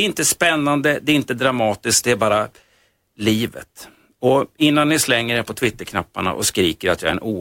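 No technical faults can be heard anywhere in the speech recording, and the signal stays steady and continuous throughout.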